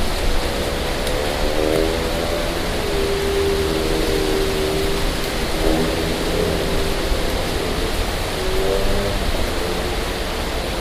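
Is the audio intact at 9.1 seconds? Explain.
Yes, the sound is intact at 9.1 seconds, with no dropout, click, distortion or other fault at that moment.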